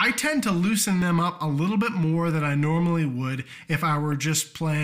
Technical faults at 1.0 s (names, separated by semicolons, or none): corrupt frame decoded